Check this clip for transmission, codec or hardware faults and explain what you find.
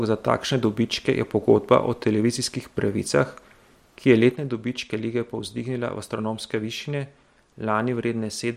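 One fault is present, a sudden gain jump. At 4.32 s the digital gain drops by about 6 dB from one sample to the next, likely a level setting applied without a ramp. The speech and the background noise fall together and stay at that lower level to the end.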